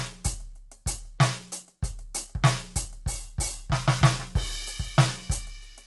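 A music clip with plainly audible low-delay AAC compression throughout, likely AAC-ELD at a rate that fits about 32 kbps: grainy, rough texture, with a spectrogram showing noise filling between harmonics and a hard ceiling near 11.6 kHz.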